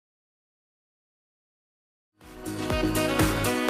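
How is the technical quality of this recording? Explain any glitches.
The technical quality of this recording is good, with no glitches to explain, and the smooth fade-in ending at 3.1 s is an ordinary edit.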